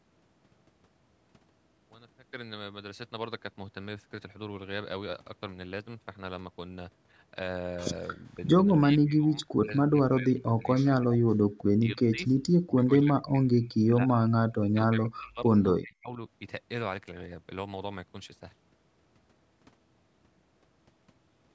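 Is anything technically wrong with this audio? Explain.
Yes. The speech repeatedly dips and breaks apart between about 8.1 and 16.2 seconds: slightly at 8.1–8.42 s, then sharply at 8.78–11.39 s, 11.78–12.21 s, 12.63–15.55 s and 15.74–16.18 s. In the longer stretches it drops by roughly 40 dB and cuts out in pieces. This is likely speech suppressed in double talk. While both ends spoke at once, the echo canceller couldn't separate this talker from loudspeaker echo and turned the microphone down.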